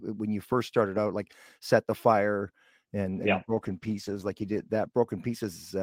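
From 3.11 s to 5.71 s the speech shows a call bitrate drop: the encoder, told to spend far fewer bits, codes coarsely and trims the highs, which fits a fall from about 32 to 13 kbps. The sound turns rough and muffled, worst for about 1.5 s.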